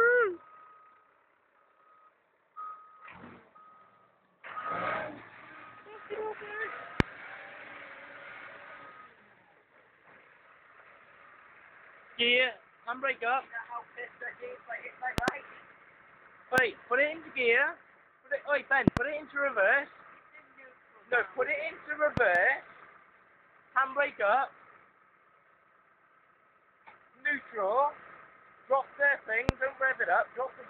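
Sharp loud pops cut through the sound, which carries on underneath, at 7.00–7.02, 15.18–15.30 (a double), 16.58–16.60, 18.88–18.99 (double), 22.17–22.38 (a softer double) and 29.49–29.51 s. They stand well above the sound and are likely caused by sudden voltage spikes from a plug, switch, static or driver glitch.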